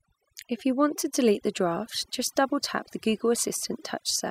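From start to finish the speech carries overdone noise removal: bands near the estimated noise floor are pulled far down, leaving near-silent gaps with twinkling specks. Unlike a noise gate, which shuts everything at once, this flickers band by band.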